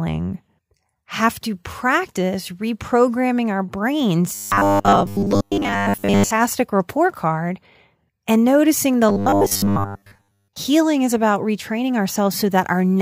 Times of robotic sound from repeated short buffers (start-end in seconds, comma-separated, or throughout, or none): 4.35-6.31, 9.09-10.56